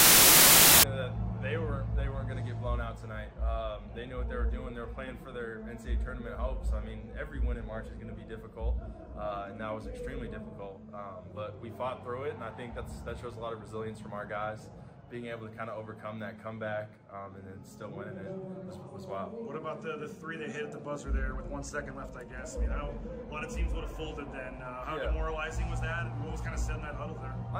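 From 0 to 0.83 s there is a wrong sample width fault, which fits 16-bit samples being read as packed 24-bit ones. Bytes straddle sample boundaries, so loud hiss buries the sound, running 1.5 times fast and pitched up. The waveform looks like a dense block, and the spectrogram shows broadband noise.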